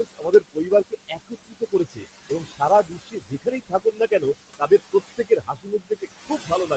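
Noise suppressor artifacts run through the whole clip. Steady room noise is pulled down by about 19 dB between phrases and rises again under the speech.

From 0.04 to 4.23 s, the noise suppressor cuts speech it mistakes for noise. Soft sounds drop by up to about 21 dB, roughly two seconds in all, and sound swallowed.

From 4.59 s to the end, speech is cut by the noise suppressor again. Quiet parts sink by up to about 21 dB and come across faint.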